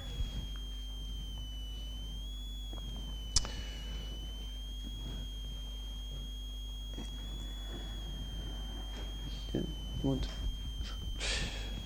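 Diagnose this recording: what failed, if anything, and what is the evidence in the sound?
A switching power supply in the analogue stage is leaking its regulation cycle into the signal path, producing a switching supply whistle. It runs for the entire recording as a high, thin tone near 3 kHz, wandering between about 2.9 kHz and 3.39 kHz as the supply's load shifts. It sits roughly 10 dB below the wanted audio.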